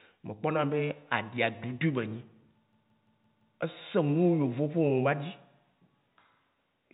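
From 2.73 to 3.58 s, a system hang loop replays one 171 ms slice of speech five times, a 5.86 Hz machine-gun stutter that shows as identical repeated blocks on the waveform. The G.711 telephone coding leaves the spectrogram empty above 3.8 kHz throughout.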